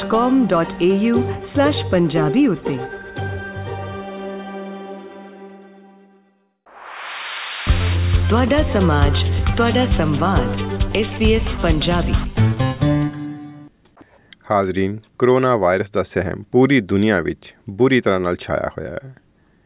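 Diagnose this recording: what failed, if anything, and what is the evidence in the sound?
Nothing stood out on listening, and no stage of the chain shows any sign of having failed.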